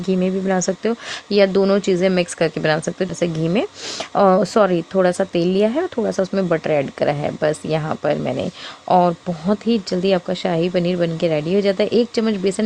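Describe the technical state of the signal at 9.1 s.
At 9.1 s the signal is intact, with no audible fault.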